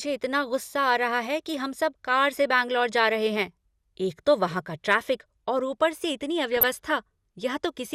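From 6.51 to 6.68 s, the speech breaks into DAB burbling. The reception was weak, so bit errors slipped past the error correction and corrupted the MP2 audio data. The damage spans several consecutive frames. Bad samples put short blips of noise into individual sub-bands, and bad scale factors, where they get through, throw sub-bands to the wrong level. The result is a burbling disturbance over the voice. It fits a bit error rate of around a fifth of a percent.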